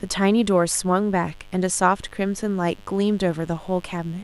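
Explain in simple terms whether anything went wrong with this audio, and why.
Mains buzz runs through the whole clip, a steady, raspy hum under the speech. Electrical interference, from something like a dimmer, a rectifier or a poorly shielded cable, lets sharp spikes from the 50 Hz power supply leak into the recording, filling it with a faint buzzing tone.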